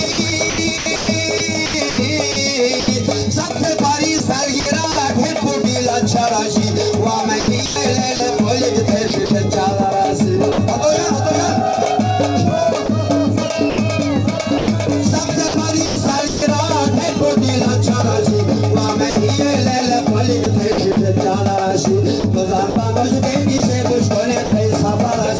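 Sound chopped by the voice detector appears at 0.12–2.88 s, 4.18–4.96 s, 7.40–10.58 s, 12.86–16.42 s and 19.10–25.39 s. Each stretch has gaps totalling 120 to 640 ms where quiet portions and edges drop to synthetic comfort noise. This is likely the sender's detector toggling transmission. Across the clip nothing is heard above 8 kHz, which fits a G.722 call path.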